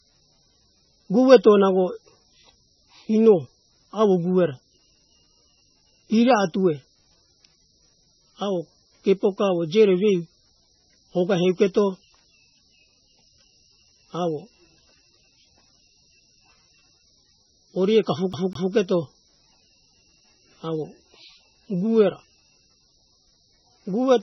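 Right from the start the whole recording has a dull, watery quality. Nothing comes through above about 5.9 kHz, so the s sounds lose their bite and turn lispy, and there's a swirly, bubbling texture on the speech as weak parts of the spectrum flicker in and out between frames. That's heavy MP3 compression, most likely at a very low bitrate, and the damage fits something around 16 kbps, where the encoder simply runs out of bits and discards detail.

Then at 18.33 s you get the CD stuck on one turn. The same 0.2 s slice of speech plays twice in a row, with a tiny mute at each jump, until it lets go at 18.74 s. That's the laser being thrown back a track at the same spot on each revolution, so you hear that quick, even stutter of a skipping disc. It's short here.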